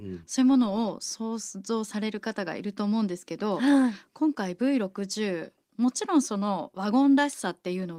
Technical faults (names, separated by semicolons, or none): none